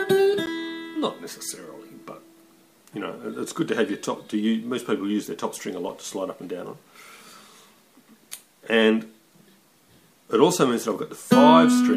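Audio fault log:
0.46 s and 5.89 s, block of digital silence: a tick or dip at each point, about 12 ms then about 6 ms long. The audio drops straight to silence and back without a fade; the lengths fit 512-sample and 256-sample buffers not filled in time.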